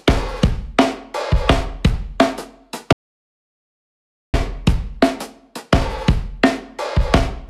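The audio cuts out abruptly at 2.93 s and returns mid-flow at 4.34 s, an audio dropout to silence lasting about 1.41 s. The gap is true silence rather than quiet: even the room tone disappears, so whatever sounded in that stretch is simply missing. The likely cause is the input being lost for that moment, through a disconnected device, a failed link or an accidental mute, while the recorder kept writing silence.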